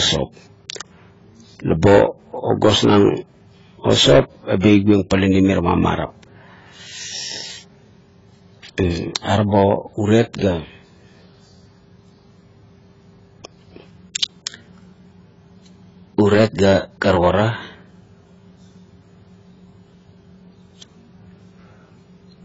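AAC compression, throughout the 22-second speech clip: nothing reaches above 7.6 kHz, and the speech is dull and smeared, with a warbling, fizzy edge on sibilants. This is likely heavy AAC-LC coding at a bitrate as low as 16 kbps, which discards high bands to save bits.

Pre-echo, from 4.60 to 4.64 s, just after "o sop": a short hiss runs for about 34 ms ahead of a sharp onset, which sounds softened. The codec spread its quantisation noise across the whole transform block, so the quiet moment before the attack carries noise sized for the louder sound.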